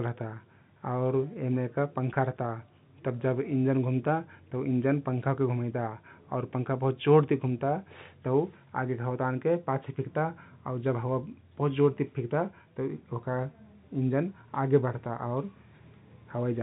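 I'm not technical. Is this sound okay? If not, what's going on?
No. At about 2.14 s there's packet loss with pitch repetition: a tiny piece of the speech, about 10 ms, went missing, and the receiver filled it by replaying the sound just before it. Unlike a click or a silent dropout, you hear a brief held buzz rather than a gap. The speech has the narrow telephone quality of G.711 telephone coding.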